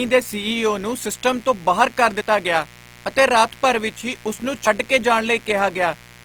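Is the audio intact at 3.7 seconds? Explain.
No. Mains buzz runs through 3.7 s and the whole clip: switching spikes from a 60 Hz supply add harmonics that reach into the kilohertz range, giving a steady, raspy buzz roughly 25 dB under the speech.

Opus compression damage is also present throughout. The grainy, rough texture likely comes from CELT-mode Opus filling starved bands with folded spectrum or noise, which fits a low bitrate of about 24 kbps.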